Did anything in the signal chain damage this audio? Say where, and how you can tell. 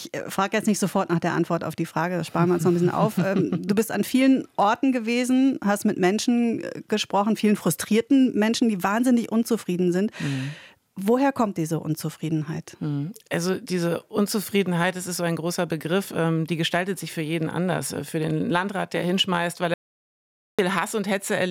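Yes. An audio dropout to silence runs from 19.74 to 20.59 s: the sound cuts off abruptly and resumes mid-flow, with about 0.85 s of silence and no room tone between. The likely cause is a lost input upstream of the recorder, which kept writing silence.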